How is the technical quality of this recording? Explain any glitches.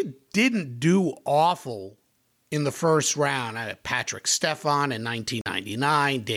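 The speech drops out once, briefly, near the end. From 5.41 to 5.46 s the sound cuts to silence for about 45 ms and then resumes. This is likely a Bluetooth stall: radio interference delayed the audio packets, the headphones' small playback buffer emptied before they arrived, and output halted until the retransmitted data caught up. Heard on playback, it is a short gap of silence.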